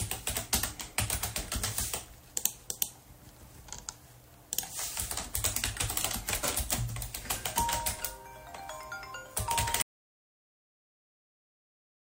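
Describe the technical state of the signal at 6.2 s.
At 6.2 s the audio is intact, with no dropout, clipping, distortion or other fault audible in the sound at that point.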